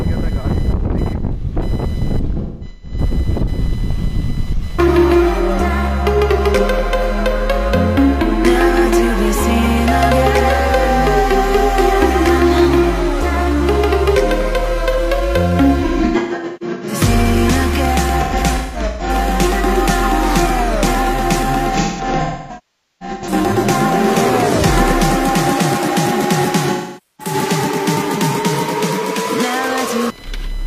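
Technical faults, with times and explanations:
Throughout, computer activity noise: there's a buzzy, chirpy layer pulsing at around 1 kHz, sitting roughly 25 dB below the sound. It comes from the machine's own load swings (processor, graphics, mouse) pushing current through the ground the audio circuit shares, so the buzz follows what the computer is doing rather than the audio itself. That's why it keeps chattering away in the same rhythm whatever the sound is doing.
Throughout, sample clock jitter: there's a faint hiss or grittiness riding on the sound, roughly 40 dB down. The converter's clock wobbles by something on the order of a microsecond or two, so each sample lands a touch early or late. That timing slip costs the most where the waveform moves fastest, so the roughness swells on loud, bright passages and drops away whenever things go quiet.
2.39–2.98 s, 15.80–16.94 s, 18.23–19.10 s, 21.73–23.33 s and 26.72–27.34 s, AAC frame loss with concealment: each of these is a patch where the audio turns smeared, noisy and a bit phasey. 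Chunks of the stream went missing, and the decoder papered over them by reusing the last good spectrum with jumbled phase. The gaps are scattered rather than solid. About 0.34 s is missing across 0.43 s in the first, 0.73 s across 1.1 s in the second, and 0.47 s across 0.85 s in the third. The fourth is the worst, with about 1.15 s missing across 1.5 s and one stretch of roughly half a second, long enough that the fill-in sags toward silence and then fades back up. The last patch loses about 0.47 s.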